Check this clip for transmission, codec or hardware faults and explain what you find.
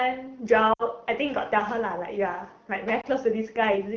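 Two bursts of lost AMR speech frames appear, at 0.73 to 0.83 s and at 3.01 to 3.06 s. Frames failed their checksum over the radio link, so the decoder filled the gaps by reusing the last good pitch and vocal tract settings at falling gain. The first gap, about 60 ms and consistent with three 20 ms frames, drops to near silence within two frames. The second, roughly a single frame, is a short dip or warble. The wideband coding underneath sounds consistent with a 12.65 kbit/s AMR-WB stream.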